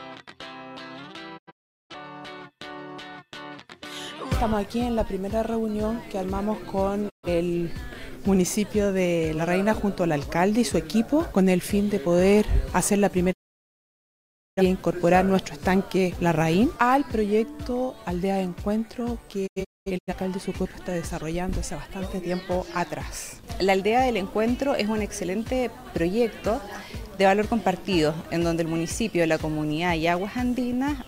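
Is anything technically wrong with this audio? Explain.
Yes. There are four digital broadcast dropouts. Each time, the receiver stopped getting usable frames, either because the signal was lost or because frames failed their error check, so it muted until clean data returned. Each mute comes in with a short fade of about 20 ms, leaving silent holes in the audio, and whatever was transmitted during those gaps is gone.

At 1.37 s, about 470 ms goes missing in several holes spread over roughly half a second. The longest of these is 384 ms. At 7.08 s there is a single 128 ms gap. At 13.31 s the sound is silent for 1.24 s before it returns at 14.62 s. At 19.46 s, 384 ms drops out in fragments over about 600 ms, with the longest run at 213 ms.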